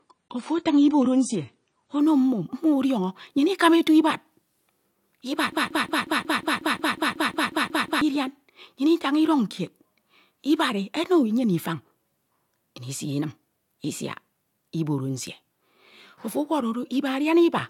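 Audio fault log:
0.0–2.0 s adaptive stream starting at a low bitrate: nothing above 9.7 kHz and heavier codec artefacts, fitting a 24 kbit/s start, then a sudden gapless step up.
5.52–8.01 s broken-record loop: a 0.18 s fragment repeats exactly, back to back, 14 times, and the audio due there is lost; likely a stalled stream resending its last fragment.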